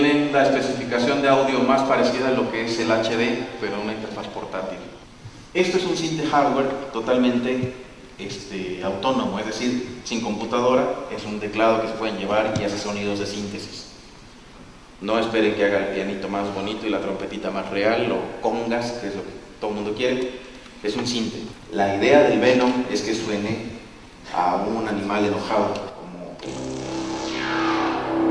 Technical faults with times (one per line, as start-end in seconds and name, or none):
none